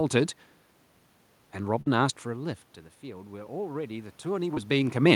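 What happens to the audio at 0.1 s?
At 0.1 s the speech is intact, with no dropout, click or distortion, just the background noise of the room the microphone sits in.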